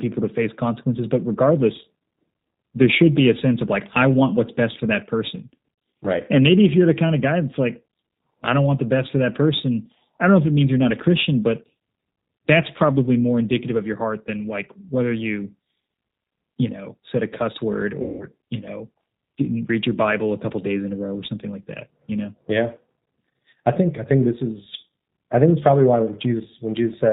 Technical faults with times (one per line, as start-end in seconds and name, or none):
0.00-27.12 G.729 codec
6.02-6.06 VoIP packet loss concealed by the speech codec
18.02-18.26 VoIP packet loss concealed by the speech codec